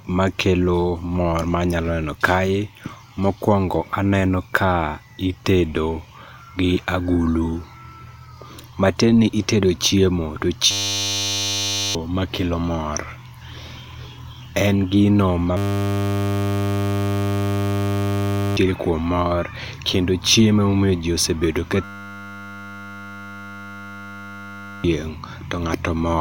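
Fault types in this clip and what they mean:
system hang loop: a frozen driver kept replaying one 10 ms buffer, giving three steady 100 Hz buzzes instead of the silent gap of a dropout.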